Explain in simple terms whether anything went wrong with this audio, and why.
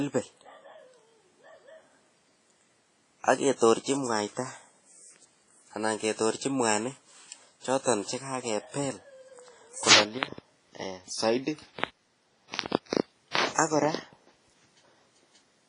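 Yes. The speech has a washy, ringing quality with breathing hiss and nothing above about 10.4 kHz, most likely from heavy WMA compression squeezing the sound hard.

Pre-echo appears at 3.56 s and 12.87 s: a short hiss arrives 50 to 60 ms before sharp sounds, because the codec smears noise backwards, softening their attacks.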